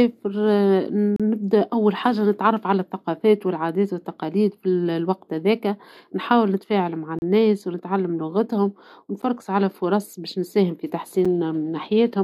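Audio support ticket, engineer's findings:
Gap between stream segments at 1.16–1.20 s (about 34 ms), 7.19–7.22 s (33 ms), 9.22 s (10 ms) and 11.25 s (7 ms). Hard-edged silent holes on 2 s segment boundaries. Segment timestamps don't abut, so the player pads with silence. Unlike a dropout, no audio is removed.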